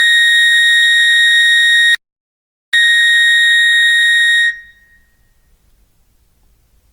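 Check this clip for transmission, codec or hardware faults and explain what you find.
Two faults stand out in this music clip: a generation-loss texture throughout, and one dropout to silence.

Generation loss runs through the whole clip. The music sounds swirly, smeared and hollow, with attacks blurred, more degraded than a single 64 kbit/s Opus encode would leave. This is likely the result of around ten successive Opus decode and re-encode passes. Each pass quantises on a shifted frame grid, so the noise piles up. On a spectrogram, content still reaches about 20.5 kHz, but it shows smeared transients.

An audio dropout to silence runs from 1.95 s to 2.74 s, about 0.79 s in all. The music cuts off abruptly and resumes mid-flow, and no room tone or noise floor remains in the gap. The likely cause is the input being lost for a moment, with the recorder or encoder continuing to write silence. 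On the waveform this appears as a flat line. On the spectrogram it is a dark vertical band with hard edges.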